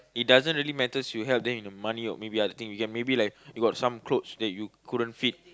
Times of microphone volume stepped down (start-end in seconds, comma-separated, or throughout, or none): none